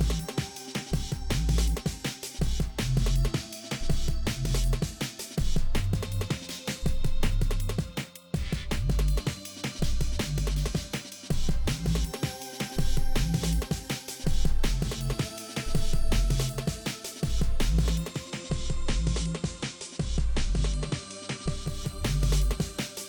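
From 17.99 s to 21.92 s the receiver shows digital radio blending to analogue: a cross-fade of about 0.45 s to the FM broadcast and back. FM hiss rises to roughly 30 dB below the signal, and level drops about 1 dB.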